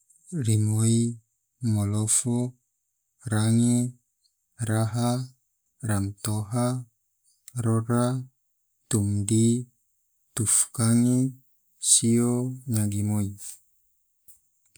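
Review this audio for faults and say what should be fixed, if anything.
Nothing here needs fixing; I listened to the whole speech recording and didn't hear any technical problems worth addressing.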